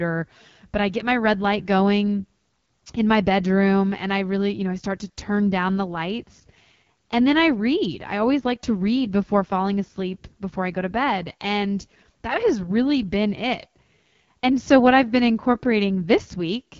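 From start to finish, the speech carries AMR wideband (HD Voice) codec damage, and it is plainly audible. Nothing reaches above about 7.4 kHz. The codec rebuilds the voice from a pulse-driven model of the vocal tract up to 6.4 kHz and pads the top band with shaped noise. Here that model is starved of bits. The roughness fits the 8.85 kbit/s rate, one of the two lowest. Voiced sounds come out raspy and gritty throughout.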